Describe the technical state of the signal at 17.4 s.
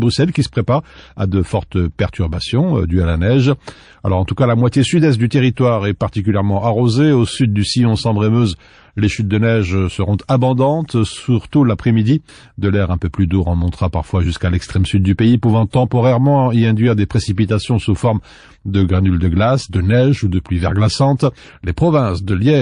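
Pre-echo runs from 17.35 to 17.38 s: a short hiss rises about 12 dB in the 24 ms before a sharp onset. The codec spread quantisation noise across a roughly 52 ms long block instead of switching to short blocks, so the attack sounds smeared.

Underneath, the whole passage carries plainly audible MP3 compression, likely from encoding at a low bitrate in the region of 40 kbps. Bits are spent where a hearing model expects them to matter, and weak lines drop in and out between frames, giving a watery, swirling texture.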